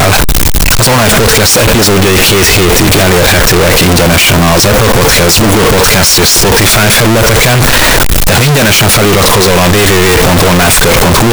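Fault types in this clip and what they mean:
Signed and unsigned mixed up, throughout the clip: the speech comes with loud, harsh distortion from start to finish, and the pauses are as loud as the speaking. This is likely because the samples are being read with the wrong sign convention, which fits 16-bit audio where flipping the top bit turns every zero crossing into a leap across the entire range, so even near-silent moments come out as loud as the speech.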